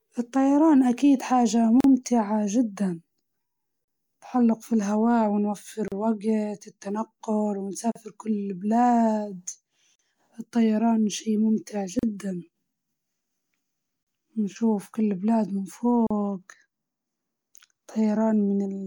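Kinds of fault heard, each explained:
Gap at a join of encoded pieces: 38 ms silences cut the speech every 2 s, 1.80 to 16.07 s, left by untrimmed encoder delay and padding.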